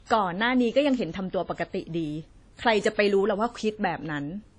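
Throughout the speech, nothing sounds above 10 kHz, and the artefacts of the earlier encoding remain. This is likely low-bitrate audio saved at a high bitrate, re-encoded after an earlier lossy pass.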